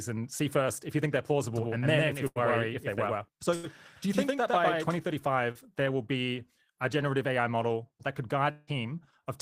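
A doubled audio track runs from 1.56 to 4.98 s, just after "if you think they're": a second, equally loud copy trails by around a tenth of a second, likely from a slower capture path.

Bursts of packet loss hit at 2.27–2.39 s and 3.56–3.66 s. Each time about 80 ms of audio never arrived, so the last sound is stretched and faded before the speech jumps ahead.

A short concealed packet loss at 5.51–5.58 s, just before "there will be a", replaces about 40 ms with a continuation of the preceding sound, heard as a brief smear.

A long network dropout from 8.51 to 8.70 s, after "model that could", likely cut off the stream. About 160 ms is lost, bridged by a fading buzz or hiss, and the speech then resumes further on.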